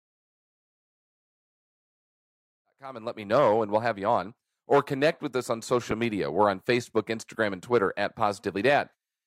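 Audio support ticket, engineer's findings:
Corrupt frame decoded at 5.91 s, just after "connect with us on": short blip or burst, energy at wrong frequencies. Decoder played a few bit-damaged frames with wrong gains or misread codes. Fade-in ending 3.56 s is clean.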